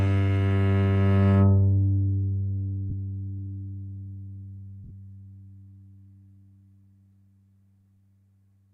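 Two brief noisy smears interrupt this recording of everyday sounds, each caused by lost LE Audio frames. At 2.90 s about 22.5 ms of audio turns grainy, which fits three 7.5 ms LC3 frames going missing. At 4.84 to 4.91 s, 37.5 ms of gaps are scattered over 60 ms, with the longest run around 20 ms. During each dropout the decoder repeats the last spectrum with randomised signs, so the sound blurs into noise. The light codec compression beneath it stays faint.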